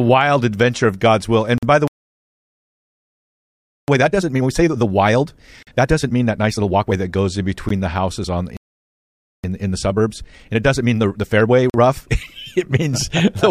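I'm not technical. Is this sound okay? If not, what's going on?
No, it isn't. Here's what's happening, in plain terms.

Gap between stream segments: short hard-edged holes of silence at 1.58 s, 5.63 s, 7.69 s and 11.70 s, mostly about 45 ms (the one at 7.69 s is briefer), where the 2-second chunks don't quite join up.

Playback stall: the speech just stops from 1.88 to 3.88 s (a full 2 seconds) and again from 8.57 to 9.44 s, likely because the player ran out of data.

Time-compressed catch-up: right after each stall the speech is hurried at normal pitch, 1.5 times speed from 3.88 to 6.92 s, then 1.25 times from 9.44 to 12.48 s.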